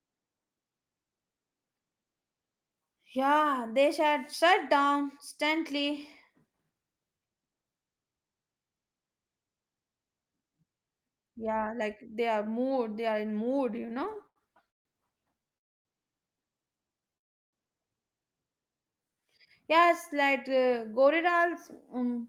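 From 13.71 to 15.58 s the speech goes into repeated stalls, a stutter. Packets were reaching the receiver late or too slowly, so its jitter buffer kept running dry, nineteen times across that stretch. Each gap got papered over by stretching the last bit of sound, about 403 ms of fill in total, roughly 22% of the span, with the longest hold around 150 ms. Nothing's actually lost, but the speech drags and catches.

Right after, from 15.58 to 15.87 s, there's a call audio freeze. The speech stops dead for about 275 ms, almost all of it silence, then picks up exactly where it left off. The likely cause is packets held up in transit, emptying the buffer so the receiver had to wait it out. That inserts a gap rather than dropping anything.

A second, much smaller stutter shows up between 16.94 and 17.10 s: three tiny stalls, the longest only about 9 ms, about 21 ms filled overall.

Then at 17.17 s another call audio freeze hits, lasting until 17.55 s. 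That's about 355 ms, nearly all silent, before the speech resumes intact. Same story as the first one, with a longer hold-up on the network side as the likely culprit.

From 18.77 to 20.32 s you get a jitter buffer slow-down. The receiver was rebuilding its reserve by repeating single pitch periods and bits of pause over and over, adding about 148 ms. The speech plays at around 91% speed with the pitch unchanged, so sounds come out a bit drawn out and lazy.

Finally, from 21.96 to 22.25 s, there's a jitter buffer speed-up, the reverse move. The buffer was holding more than it wanted, so the receiver snipped out short pitch-period pieces, roughly 40 ms' worth. The speech runs at about 110% speed, same pitch, and sounds rushed right at the end.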